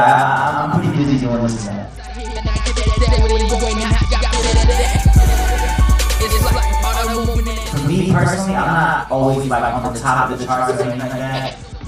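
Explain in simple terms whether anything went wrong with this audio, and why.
Two things went wrong. The first is a doubled audio track. The whole clip plays twice, with a second copy about as loud as the first, trailing roughly a tenth of a second behind. That gives a stuttering, echo-like smear. The likely cause is the sound being captured twice by two paths.

The second is a Bluetooth SBC bit pool drop, from 0.95 to 4.74 s and again from 11.46 s to the end. The wireless link got busy. The phone squeezed the sound into fewer bits. Treble turns dull and a gritty roughness creeps in.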